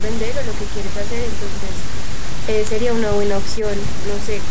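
There are no technical faults to describe at any point in this speech, which has gone through normal call microphone processing with nothing above 8 kHz.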